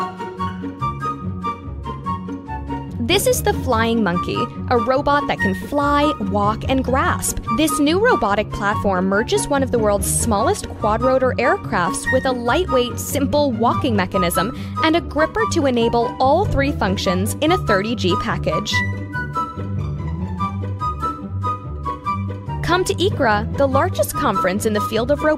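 Nothing in this audio is technically wrong.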